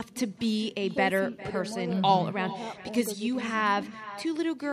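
Echo with no canceller runs throughout this speech clip: the far end's loudspeaker feeds its microphone, returning a thin copy about 15 dB quieter, roughly 0.4 s late.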